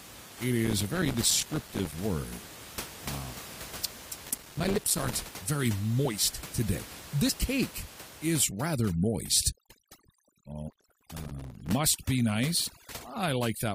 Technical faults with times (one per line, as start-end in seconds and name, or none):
0.65-1.94 processor overload crackle
4.26-5.13 processor overload crackle
4.74-4.79 compressed frames skipped
6.05 compressed frames skipped
7.28 compressed frames skipped
8.44-13.74 overdone noise removal
10.69-11.72 processor overload crackle
12.66-12.70 compressed frames skipped